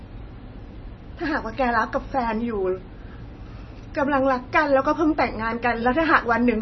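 From start to end, nothing sounds above 5.9 kHz, so the treble is simply gone. Weak detail flickers in and out, giving a watery, swirly texture. S sounds chirp metallically and onsets smear. The likely cause is heavy MP3 compression, fitting roughly 24 kbps.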